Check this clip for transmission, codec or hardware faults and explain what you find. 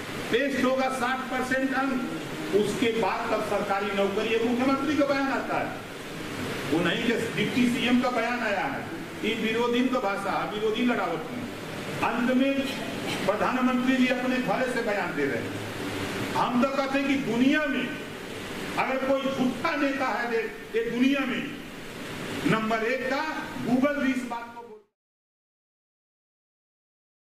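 No transmission, codec or hardware faults are present, and the only level change is a deliberate smooth fade-out beginning at around 24 s and finishing at 24.96 s, with no click or hard edge.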